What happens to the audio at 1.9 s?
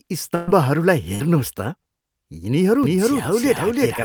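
Nothing goes wrong at 1.9 s; the speech runs on intact through that moment, with no dropout, click, or other fault to be heard.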